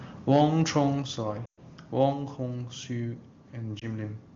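At 0.35 to 0.43 s the loudest peaks get a harsh, crackly edge, pushing about 2 dB past the limit. That's microphone overload, likely from the input gain being set too hot. At 1.02 s and again at 2.13 s everything drops abruptly, background included, first by about 5 dB and then by about 3 dB. That sounds like the microphone volume being stepped down, likely by the call software reacting to the level. From 1.45 to 1.59 s the sound drops to near silence for about 120 ms as the decoder fills a run of lost AMR speech frames, which fits a stretch of roughly six frames. A shorter dip follows at 3.79 to 3.84 s, consistent with a single lost frame in the AMR-WB stream.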